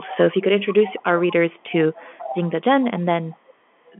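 Echo leak appears at 0 to 0.18 s, 0.36 to 0.42 s, 0.72 to 1.03 s, 1.5 to 1.76 s, 1.94 to 2.63 s, 3.32 to 3.54 s and 3.85 to 3.93 s. A delayed copy of the speech returns about 0.45 s late, in short scraps. It sits roughly 15 to 35 dB below the speech. The likely cause is a far-end echo canceller that let its loudspeaker pickup through.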